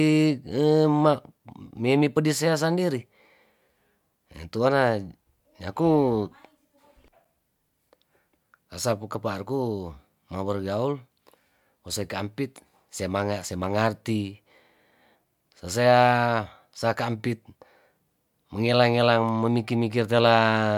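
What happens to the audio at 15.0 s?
Nothing goes wrong at 15.0 s; the speech carries straight through that moment with no audible fault.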